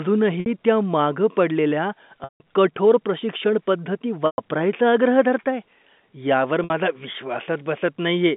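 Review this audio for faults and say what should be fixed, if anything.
Packet loss with pitch repetition at 0.40, 2.24, 4.26 and 6.64 s, gaps of 60, 160, 120 and 60 ms (the first just before "त्या मागं पडलेल्या", the third just before "आग्रह धरताय"). The receiver loops the last pitch period to fill each gap, so the shorter gaps sound like a held, buzzy tone, and the 120 and 160 ms gaps fade toward silence before the speech cross-fades back in. To prevent this, stabilise the network path and add forward error correction or redundant packets so that lost packets can be rebuilt rather than concealed.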